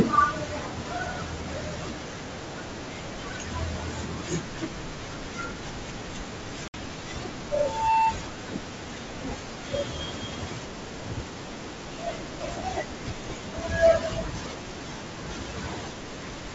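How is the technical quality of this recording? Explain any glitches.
Two faults stand out in this speech recording: a brief dropout followed by slightly distorted speech, and a feedback squeal shortly after. The G.722 wideband coding leaves little audible trace of its own.

From 6.68 to 6.75 s there is packet loss on an ADPCM call. About 60 ms of audio, likely around three packets, is replaced by a hard-edged silence. The decoder's adaptive predictor and step size then no longer match the sender's, so the speech comes back slightly distorted before it resettles.

From 7.52 to 8.18 s there is a loudspeaker feedback squeal. A microphone is picking up its own loudspeaker, and at 892 Hz the loop gain exceeds one. That tone swells over roughly 0.4 seconds to about 10 dB above the speech.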